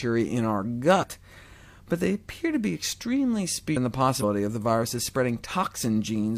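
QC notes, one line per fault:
0.98–1.04 s and 4.18–4.24 s: damaged data in a compressed stream. Two brief disruptions, about 65 ms and 54 ms long. Corrupted bytes made the decoder misread frames and lose sync. The sound breaks up until it locks onto the next valid frame header.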